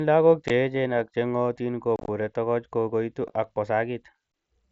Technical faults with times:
0.48 unconcealed Bluetooth headset packet loss
1.96-2.08 unconcealed Bluetooth headset packet loss
3.28 unconcealed Bluetooth headset packet loss

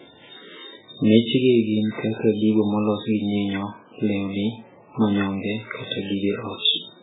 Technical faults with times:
0.00-7.02 MP3 compression

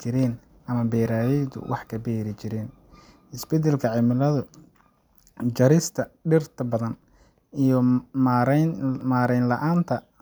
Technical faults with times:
3.05 audio missing between chunks
7.02 audio missing between chunks
9.01 audio missing between chunks

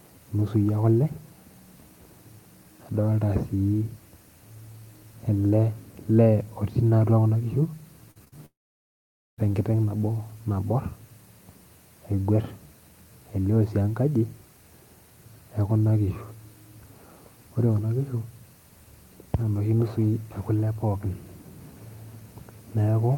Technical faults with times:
8.11-8.34 short concealed packet loss
8.46-9.39 long network dropout

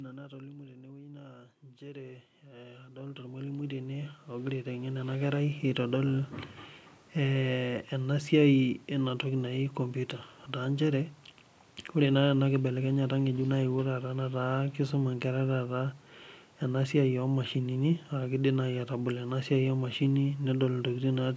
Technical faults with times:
1.61-5.56 automatic gain rising

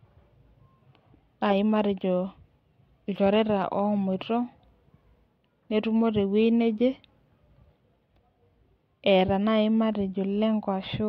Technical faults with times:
none

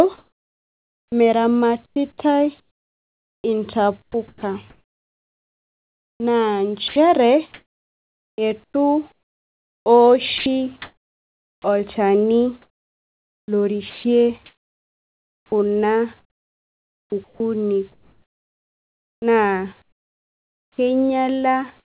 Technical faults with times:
0.18-11.64 sound chopped by the voice detector
12.62-20.78 sound chopped by the voice detector
21.80-21.99 comfort noise in place of the background

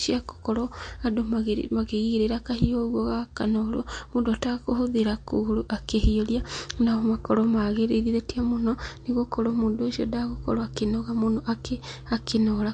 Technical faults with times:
0.00-12.73 MP3 compression

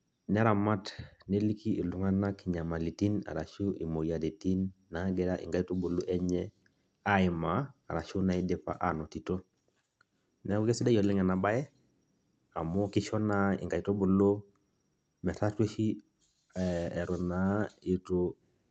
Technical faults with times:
none

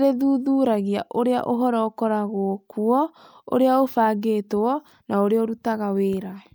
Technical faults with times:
none

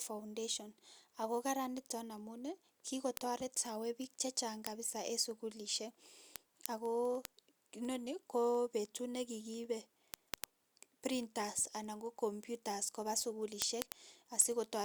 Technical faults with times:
0.19-14.81 word clock ticks

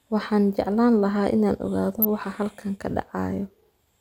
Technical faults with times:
1.99-2.05 DAB burbling

